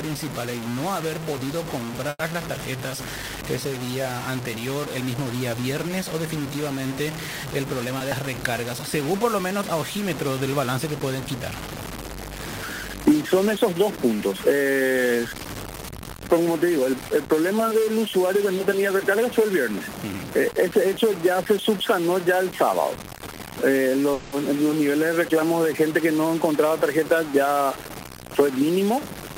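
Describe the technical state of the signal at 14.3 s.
At 14.3 s, as throughout the clip, grainy distortion tracks the sound, likely from low bit depth without dither: 4-bit truncation, noise about 15 dB below signal, with a stair-stepped waveform and a broadband spectrogram haze.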